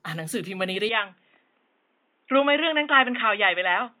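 From the first moment to the end, the speech has a swirly, hollow quality. Consonant attacks are smeared and soft. That points to generation loss: the audio was likely decoded and re-encoded around ten times with a lossy codec, and the artefacts fit MP3 at about 128 kbit/s. Each pass cut the sound up on a shifted frame grid. The quantisation noise and spectral gaps piled up beyond what that bitrate alone would give.

At 0.89 s the tone changes abruptly and stays changed to the end. There is no gap at the change. The sound turns dull and boxy, with nothing above 3.8 kHz. The level drops by about 5 dB. A faint new noise floor appears, roughly 45 dB below the speech. This is an input switched to a poorer device, likely a second microphone or a headset call profile with a narrower band.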